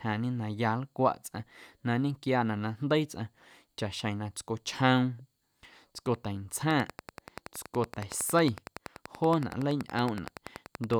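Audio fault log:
6.71–10.95 s: train of clicks, about fifty regular pulses at 10.6 per second towering over the speech, likely interference; evenly spaced vertical spectrogram lines.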